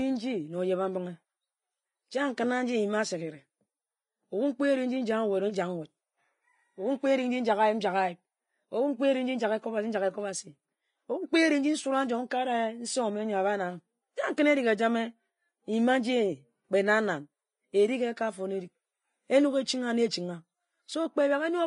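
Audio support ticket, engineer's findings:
Hissy, grainy speech with roughened tones and smeared consonant onsets, throughout. Likely Vorbis compression at a low bitrate, around 29 kbps. Treble quantised coarsely into noise-like texture. Spectrogram: hard ceiling at 10.6 kHz, with blotchy, speckled energy beneath it instead of clean harmonics.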